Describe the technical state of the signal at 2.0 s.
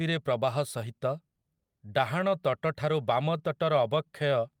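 At 2.0 s the signal is affected by clock drift between sender and receiver, present across the whole clip: the sender's clock runs roughly 3% slow relative to the receiver's, so the jitter buffer keeps draining and must be replenished. The resulting repeated timing corrections run from 0.02 s to 4.6 s, with the receiver repeating short pieces, playback at 97% speed, and around 150 ms added overall. Each edit is small, and the edits are unevenly spaced through the speech.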